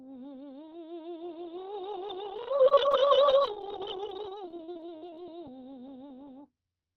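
Music that turns choppy and robotic from 2.23 to 5.26 s, with a stuttering texture as dozens of brief holes, the longest about 39 ms, punch through the sound in quick succession. This is repeated packet loss (robotic sound): about half a second of audio never arrived in time, and each gap was patched by stretching the preceding sound, so roughly 16% of that stretch is concealment. The call path's muffled top end, nothing above about 6 kHz, fits Opus at a low rate near 20 kbps.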